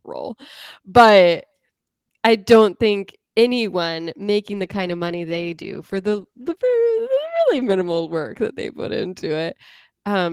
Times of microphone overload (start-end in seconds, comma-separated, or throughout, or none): none